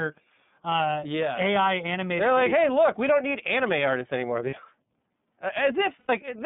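A speech recording runs through the iLBC codec for its whole length. The band is confined to roughly 150 Hz to 3.6 kHz, and the codec damage is plainly audible as a slightly rough, synthetic texture. Each short block of the voice's excitation is coded on its own, and the sound suggests 30 ms frames at about 13.3 kbps. On a spectrogram the energy stops sharply at 3.6 kHz with nothing above, and the low end thins below 150 Hz.

There are lost iLBC frames at 4.5 to 4.54 s and at 6.0 to 6.1 s. The first gap lasts about 30 ms, which fits one missing frame. The second lasts about 90 ms, which fits three. In each gap the decoder fills in by repeating the last pitch cycle blended with noise, so you hear a brief held, buzzy, breathy vowel. In the longer gap that vowel fades. On a spectrogram the harmonics flatten into steady horizontal lines through the gap, and the waveform shows a run of similar repeating periods that taper off. 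Normal speech returns immediately after each gap because every frame decodes on its own.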